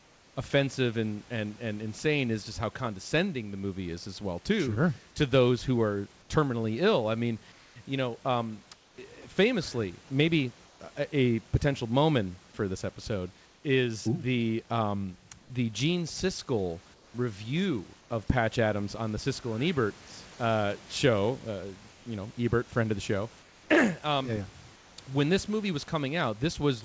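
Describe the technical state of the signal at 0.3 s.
At 0.3 s the background is a steady, featureless hiss about 3 dB quieter, comfort noise in place of the background from 0.0 to 0.36 s, ending before "offensive and and and". The likely cause is discontinuous transmission substituting synthetic noise.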